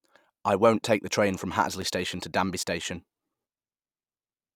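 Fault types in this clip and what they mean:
Periodic USB or driver dropouts: evenly spaced ticks cut into the speech roughly every 1.02 s between 0.80 s and 3.86 s. Each is a gap of a few milliseconds filled with silence, from a background task blocking the USB bus or audio driver at a fixed interval.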